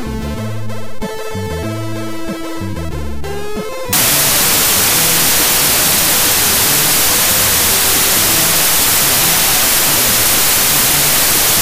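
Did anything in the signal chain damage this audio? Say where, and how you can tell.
Yes. From 3.93 s to 11.61 s there is a wrong sample width at the sample-format conversion stage. The audio turns to loud noise with the original buried in it, running 1.5 times fast and high. Data written as 16-bit integers are read as packed 24-bit, mixing bytes across samples.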